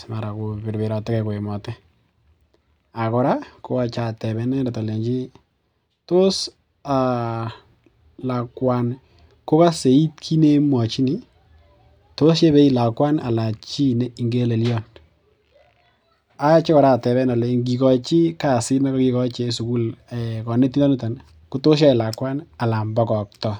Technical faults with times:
none

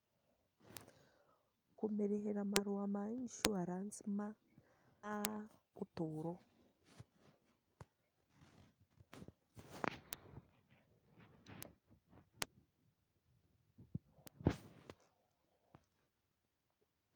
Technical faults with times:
0.77 bit error spike
2.56 bit error spike
3.45 bit error spike
5.03-5.10 skip ahead
5.25 bit error spike
5.63-6.00 jitter buffer speed-up
10.13 bit error spike
11.63 bit error spike
12.42 bit error spike
14.27 bit error spike

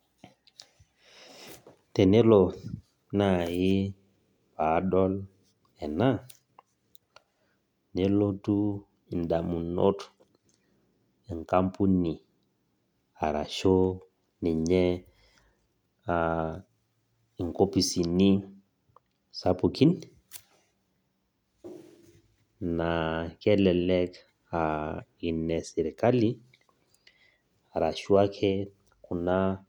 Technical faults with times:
none

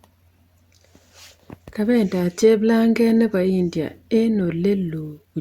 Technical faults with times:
0.39-4.45 clock drift buffer slips

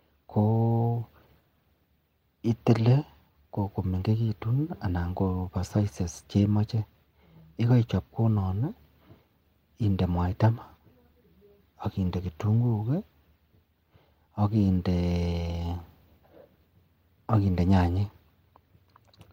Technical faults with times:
none

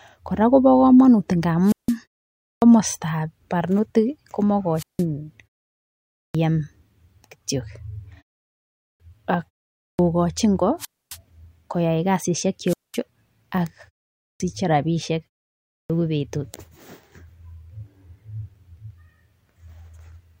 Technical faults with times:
1.64-1.95 wireless microphone squelch dropout
2.34-2.62 clipped start after a pause
4.76-5.04 wireless microphone squelch dropout
6.10-6.35 clipped start after a pause
8.74-9.00 clipped start after a pause
9.73-9.99 clipped start after a pause
10.78-11.17 wireless microphone squelch dropout
12.66-12.98 wireless microphone squelch dropout
14.15-14.40 clipped start after a pause
15.63-15.90 clipped start after a pause

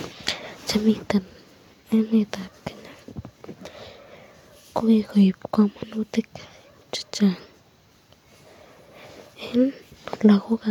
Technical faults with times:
none

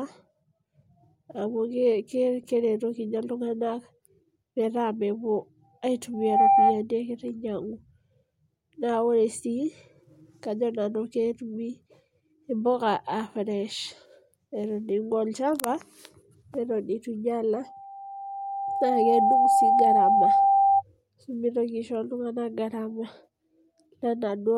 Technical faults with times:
6.13-6.84 loudspeaker feedback squeal
17.52-20.83 loudspeaker feedback squeal

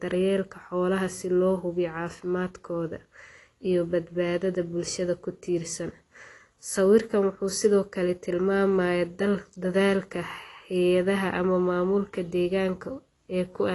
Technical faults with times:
0.00-13.74 AAC compression

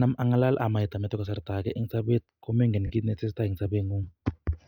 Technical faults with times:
2.87-2.92 lost LE Audio frames

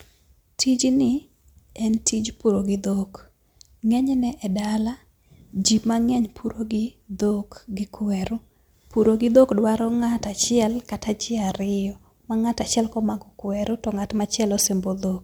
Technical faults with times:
none

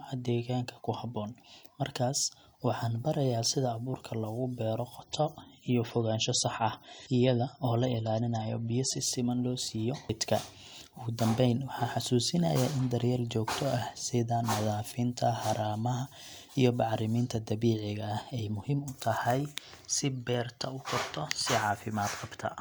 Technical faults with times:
5.01-9.01 adaptive stream at a lower bitrate

